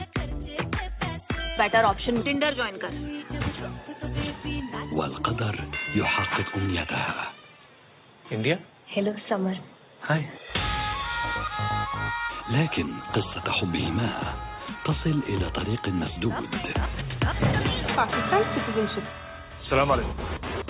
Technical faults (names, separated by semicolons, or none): none